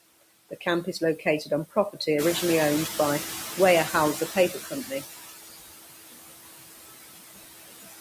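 Throughout the clip, a noise suppressor cuts the bands it judges to be steady noise by about 18 dB, frame by frame. This produces noise suppressor artifacts: the background sinks between phrases and rises under the speech.

When the room noise rises by about 11 dB at roughly 2.0 s, sitting about 9 dB below the speech, the suppressor lags. From 2.18 to 5.04 s it is catching up. Its noise estimate takes 2.86 s to adapt, so the louder background first passes with less reduction and then gradually sinks as the cut settles at about 14 dB.

Between 4.16 and 5.04 s, while that estimate is still moving, the suppressor mistakes parts of the speech for noise, and speech is cut by the noise suppressor. Around 300 ms in total is pulled down, by as much as about 12 dB, so the affected speech sounds swallowed and faint.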